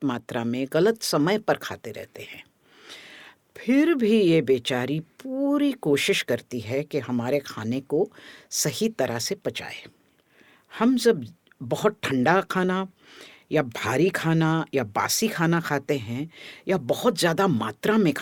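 No technical faults are audible anywhere here.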